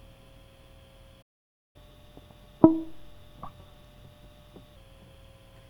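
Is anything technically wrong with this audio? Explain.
Yes, there are two related problems in this music clip. First, a playback stall at 1.22 s: the music simply drops out for about half a second, resuming at 1.76 s. The likely cause is the player running dry on data or getting its thread blocked.

Right after, from 1.76 to 4.76 s, there's catch-up at higher speed. The player races through its backlog at 1.1 times normal rate by resampling, so everything sounds rushed and sharp by roughly a semitone and a half before settling back.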